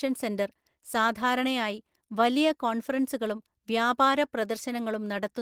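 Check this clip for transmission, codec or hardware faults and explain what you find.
Listening through the speech, I find no fault to report. Nothing in the audio calls for a fix or further explanation.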